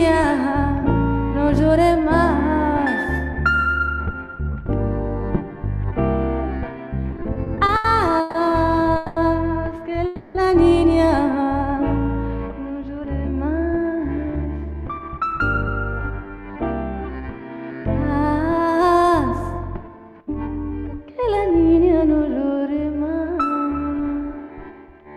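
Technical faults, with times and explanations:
7.11–8.35 s, repeated stalls (stutter): packets kept arriving late, so the jitter buffer ran dry nine times. The receiver stretched the last sound across gaps up to 140 ms, about 340 ms in all, so the sound drags and stutters without losing anything.
8.96–9.17 s and 10.06–10.36 s, call audio freeze: packets were likely held up in transit, emptying the jitter buffer. The last sound is continued as a fading buzz or hiss for 200 ms and then 290 ms before resuming where it stopped, with nothing missing.
14.17–16.54 s and 17.04–21.10 s, jitter buffer speed-up: the buffer had built up excess delay, so the receiver repeatedly cut out short pitch-period slices, roughly 200 ms per stretch. The sound runs 8% and then 5% fast at unchanged pitch, giving it a hurried feel.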